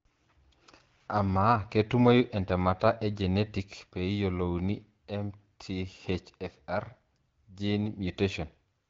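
No technical faults can be heard in the speech, which carries the light coding character of the AMR wideband (HD Voice) codec at a rate that fits its 12.65 kbit/s mode, with nothing present above 7.5 kHz.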